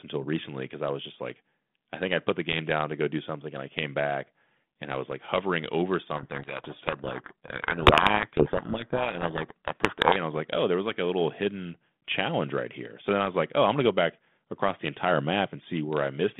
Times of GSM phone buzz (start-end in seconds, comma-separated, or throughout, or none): none